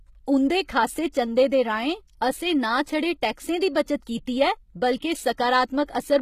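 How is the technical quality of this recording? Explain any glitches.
The recording is clearly compromised. There is obvious coding damage throughout and two brief smears before sharp attacks.

Across the whole clip the speech has a gritty, metallic treble, and nothing is present above 14.9 kHz. The likely cause is HE-AAC compression at a low bitrate, around 20 kbps. The codec keeps only the lower spectrum and synthesises the top by copying lower bands upward, so the harmonics there don't match the real ones. Plain band-limiting would sound dull. This top end is bright but wrong, which is why sibilants sound lispy rather than muffled.

At 1.12 s and 3.74 s there is pre-echo, a short hiss just ahead of a sharp onset lasting about 13 ms and 11 ms respectively. Each attack lands late in a transform block, and the noise budget set for the loud part spills into the quiet instant before it, so the onset sounds softened. 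A click would be a single tick, and reverb would trail after the attack. This noise arrives before it.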